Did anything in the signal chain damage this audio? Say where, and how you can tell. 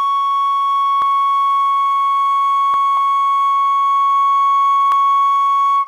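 Yes. At 1.02 s, 2.74 s and 4.92 s the music jumps forward, no gap, just a hard splice where roughly 20 ms of sound vanishes each time. That points to the driver or buffer stage, likely a dropped buffer (overrun): the capture software failed to collect a block of samples before the hardware wrote over it, so the audio on either side of the lost block is butted together.

At 2.97 s there is a different skip, with about 50 ms of music missing. This comes from the codec stage, where compressed frames were skipped because they were missing or rejected as damaged during decoding. The jump fits two frames of 26.1 ms.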